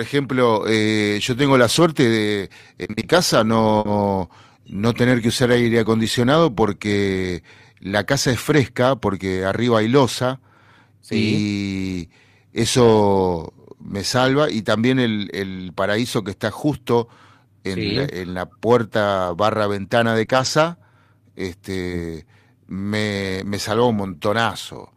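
From 1.75 to 3.87 s, just after "eh yo tengo la", there is repeated packet loss with a robotic sound. Six gaps come in quick succession, totalling 160 ms, and the longest is 60 ms. Each gap is covered by stretching the previous sound, so the audio turns choppy and robotic. On a spectrogram these patches show as smeared, repeated harmonic bands. The waveform shows flattened, looping segments scattered across the span.

At 8.49 to 8.55 s, between "porque la casa es" and "porque arriba hay losa", a lost packet is rebuilt from error correction. The same happens at 17.85 to 18.03 s, at 19.25 to 19.31 s and at 20.29 to 20.47 s. The rebuilt stretches are 40, 100, 40 and 100 ms long. Each points to a few 20 ms frames replaced by the low-bitrate copies carried in later packets. Nothing drops out, but those moments sound grainier and noisier. A spectrogram shows a coarser, noisier texture there, and the waveform shows no gap.

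At 20.25 s, right after "barra ventana", comes a short concealed packet loss. About 20 ms never arrived in time, and the decoder filled it by extending the preceding sound before blending back. It is heard as a brief smear or wobble. The spectrogram shows a thin vertical blur of extended harmonics, and the waveform a short, overly regular patch. The error-correction rebuild that begins at 20.29 s follows it directly.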